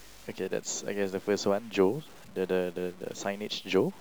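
Throughout the speech, a grainy distortion rides on the signal and changes with it, roughly 25 dB below the level, with quiet passages turning gritty and near-silent tails dropping out or sputtering. This is likely low bit depth without dither, with samples truncated to about 7 bits.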